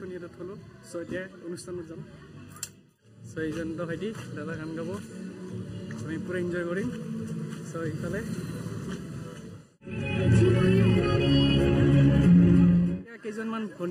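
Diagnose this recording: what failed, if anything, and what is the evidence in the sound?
Hollow, phasey colouring persists throughout, with a fixed notch near 700 Hz and evenly spaced dips above it. Channel delay (comb filtering) at the driver or buffer stage is the cause: one channel lags by under a millisecond, and the mono sum cancels shared content there.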